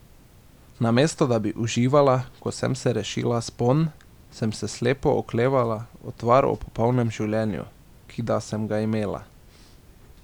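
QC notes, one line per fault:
No faults found in the speech clip. Nothing heard needs flagging.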